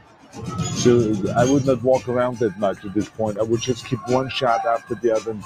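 A speech-style noise suppressor has been left running on this material, and it keeps mistaking sustained sound and tails for noise. The level swings by around ten decibels as it clamps down and lets go, so held parts sink while attacks punch through, giving a pumping, thinned feel. You can hear the sound cut by the noise suppressor in five spots: 0.0 to 0.42 s (dropping about 15 dB), 2.53 to 3.2 s (about 14 dB), 3.77 to 4.09 s (about 9 dB), 4.79 to 5.04 s (about 13 dB), and 5.26 s to the end (about 7 dB). Each time, a fraction of a second of steady or decaying sound gets pulled under or has its tail chopped short.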